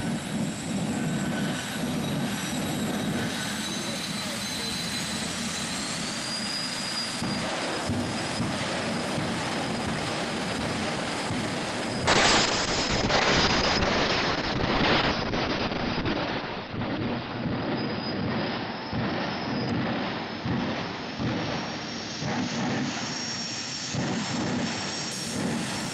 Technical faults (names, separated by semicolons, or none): call bitrate drop